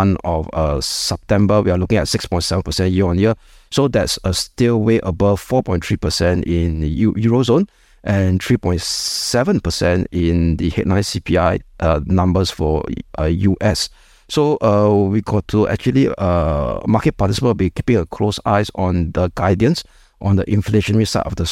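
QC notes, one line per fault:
Nothing to flag here; the speech comes through without any technical faults I can hear.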